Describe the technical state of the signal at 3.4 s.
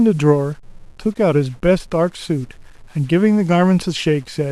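At 3.4 s, as throughout the clip, a stuck bit is the likely cause: one data bit in the speech signal stays fixed, knocking about half the samples off by a step of roughly -45 dBFS. This adds a grainy noise and fills pauses with steady noise.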